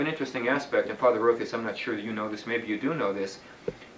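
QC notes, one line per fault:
No technical faults are audible anywhere in the audio.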